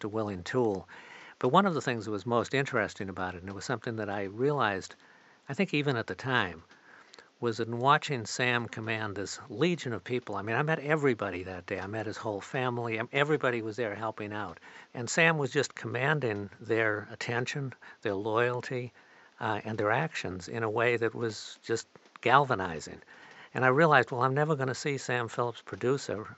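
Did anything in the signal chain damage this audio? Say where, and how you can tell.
No, nothing along the chain from microphone to playback has damaged this speech recording. The only thing under the voice is the room's own background noise, sitting about 34 dB below the speech, which belongs to the recording space rather than to any stage of the system.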